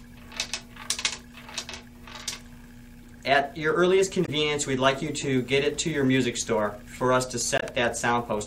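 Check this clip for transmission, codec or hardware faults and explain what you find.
Two short faults, both from damaged data in a compressed stream. At 4.24 to 4.29 s and 7.58 to 7.63 s, corrupted frames break decoding and the decoder resyncs, giving brief glitches.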